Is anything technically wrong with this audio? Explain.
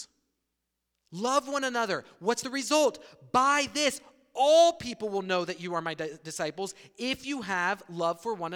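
No, nothing stood out as technically wrong when listening to this speech recording.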